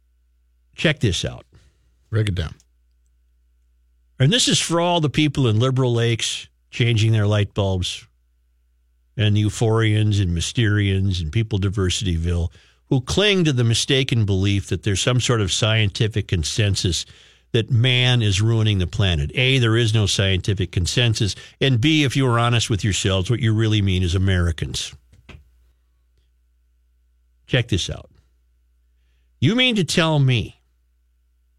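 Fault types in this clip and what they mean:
Sudden gain jump: from 24.74 to 25.72 s, right after "you really mean is", speech and background noise leap together by about 6 dB, likely from an unramped digital gain change.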